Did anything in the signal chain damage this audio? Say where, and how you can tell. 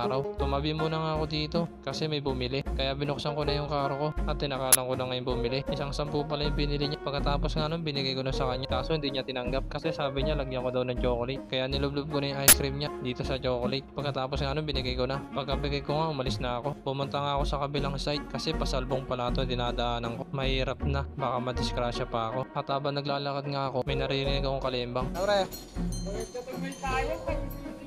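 Yes, there's an uninitialised buffer problem at the driver or buffer stage: harsh bursts of digital noise at 4.73 to 4.75 s and 12.48 to 12.53 s. Blocks went out before audio was written, so leftover memory played, fitting 1024- and 2048-sample buffers.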